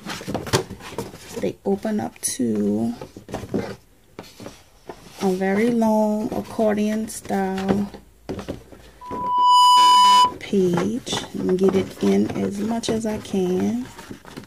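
Loudspeaker feedback squeal runs from 9.01 to 10.34 s: the microphone picks up its own loudspeaker, and at 993 Hz the loop gain exceeds one. That tone swells over about half a second into a steady squeal roughly 10 dB above the surrounding sound.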